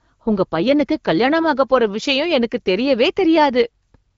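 No technical faults can be heard in the speech, which has passed through the AMR wideband (HD Voice) codec at 12.65 kbit/s, a rate at which that codec leaves only a light mark on the sound.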